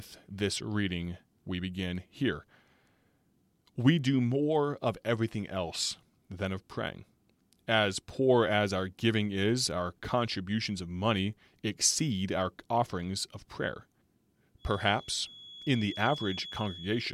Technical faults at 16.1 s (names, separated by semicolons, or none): feedback whistle